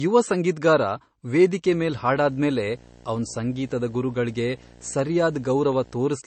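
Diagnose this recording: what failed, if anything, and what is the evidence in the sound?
The codec chain is the likely culprit: this is low-bitrate audio saved at a high bitrate. The speech has nothing above 8.3 kHz for the whole clip, along with the smeared, swirly MP3 texture of a very low-bitrate first encode. The later high-bitrate MP3 pass cannot restore what that encode discarded.

Video or display buzz has coupled into the analogue wiring, probably from a screen or video cable. From 1.65 s to 5.97 s, a buzz at the 60 Hz field rate with hash above it sits under the speech, around 25 dB down.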